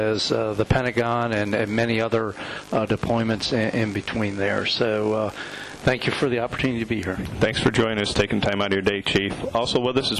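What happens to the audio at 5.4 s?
Nothing goes wrong at 5.4 s; the audio plays straight through that moment with no dropout, click, glitch or other fault.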